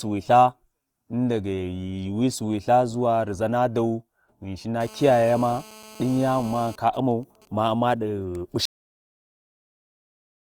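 From 4.81 to 6.76 s, a GSM phone buzz sits under the speech. A 2G phone nearby is in a call. It transmits in bursts about 217 times a second. The audio circuitry rectifies those radio pulses into the signal path. The result is a hard, raspy buzz at 217 Hz, rich in harmonics. It has nothing to do with the speech. It holds steady, at about 21 dB below the signal.

Just after, from 6.87 to 7.72 s, GSM signalling bursts take over. The same phone is still in the call, but its user has gone quiet. So it sends only short groups of bursts instead of a continuous stream. The circuit rectifies these too. What you hear is even ticks with a longer 217 Hz buzz twice a second. It is quieter than the buzz before it, roughly 30 dB down.

At 8.65 s the clip has a cut-off end. The final buffers were never written or played. The speech stops in the middle of a sound. There is no natural decay. The audio drops straight to digital silence and stays there to the end. 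Nearly two seconds of the recording are simply missing.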